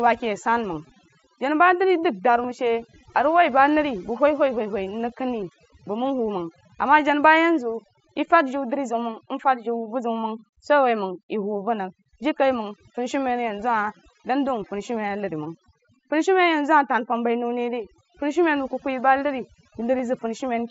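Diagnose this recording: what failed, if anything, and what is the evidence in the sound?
Call processing: overdone noise removal runs throughout, suppressing any frequency band near its noise estimate, so the background drops and breaks up into twinkling specks.

Bluetooth link: concealed Bluetooth headset packet loss at 2.43 s and 19.98 s, each about 15 ms and consistent with two lost frames, is patched from recent waveform and comes across as a short buzzy tone with a small warble where real audio returns.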